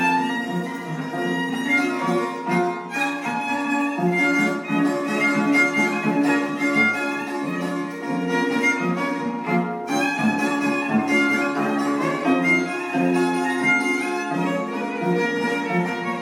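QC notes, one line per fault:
No audible faults found in this clip.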